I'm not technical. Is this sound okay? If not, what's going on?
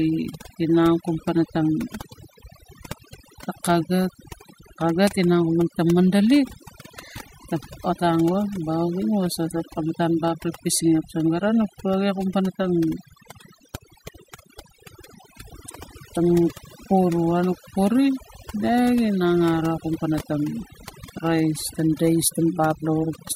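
No, not quite. The whole way through this speech clip there's overdone noise removal. Someone ran a noise-cleaning tool with the setting cranked too high, so it didn't just wipe out the background noise, it also chewed into the quieter parts of the voice. That's why the pauses sound almost dead silent with odd little twinkly specks in them.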